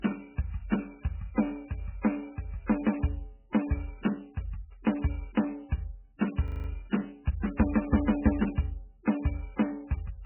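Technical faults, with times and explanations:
Throughout: MP3 compression, heavy. The music has nothing above about 3 kHz, so the top end is cut off at a fixed point and the treble is missing. At this level of damage the sound is watery and swirly, with metallic chirps and smeared attacks, which fits a very low bitrate around 8 kbps. The likely cause is an encoder so short of bits that it drops the upper frequency lines and zeroes weak ones, which flicker on and off from frame to frame.
6.48 to 6.68 s: system hang loop. For 0.2 s a single 40 ms piece of audio repeats exactly, five times over, at a rate of 25 Hz. That gives a rapid mechanical stutter in place of the music moving forward. It happens when the computer or driver stalls while the sound hardware keeps replaying the same ring buffer. Very little audio is lost across the loop.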